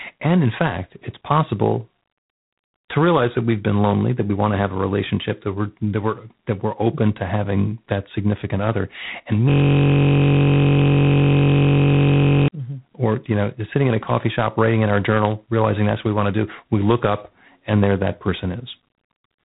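A harsh, rasping hiss rides on the speech for its whole length, swelling and fading with the level, and nothing passes above about 3.9 kHz. This is G.726 ADPCM damage, which fits 24 kbit/s: too few bits per predicted sample difference leaves coarse, signal-following quantisation noise.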